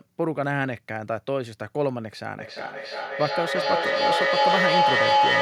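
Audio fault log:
2.4–5.41 s, feedback howl: a tone near 1 kHz swells to about 6 dB above the speech, pulsing roughly every 400 ms. Unlike a fading echo, each loop pass grows louder.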